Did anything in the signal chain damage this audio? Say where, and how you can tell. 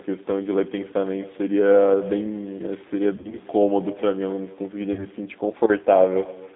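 Yes. Echo with no canceller runs through the whole clip, a call-processing fault at the far end. Every phrase is shadowed by a quieter, thinner copy about 20 dB down, arriving around a third of a second later. That delay points to the network round trip: the far side's loudspeaker fed its microphone, and no echo canceller removed the returning signal before it came back down the line.

The G.729 codec shapes the entire clip at the codec stage. The band is confined to roughly 200 Hz to 3.7 kHz, with nothing above that, and the speech has a plainly audible rough, synthetic texture. That fits an 8 kbit/s coder that rebuilds each frame from a vocal-tract filter, a pitch predictor and a handful of pulses instead of the waveform itself.

VoIP packet loss concealed by the speech codec appears at 3.16 to 3.38 s and 4.93 to 5.07 s, a network fault. In the first stretch, about 80 ms went missing in gaps of up to 40 ms spread over 160 ms. 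The second loses 40 ms across two packets. The decoder extrapolated from its last pitch and filter state, so the speech is stretched into a fading buzzy tone or coloured noise. Because each frame builds on the previous one, it stays weak and distorted briefly after the gaps end.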